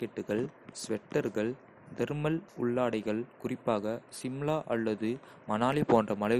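Likely MP2 compression, starved of bits in a way that fits 56 kbps, switches off upper sub-bands, leaving this speech dull, gurgling and granular throughout, with nothing above 14.1 kHz.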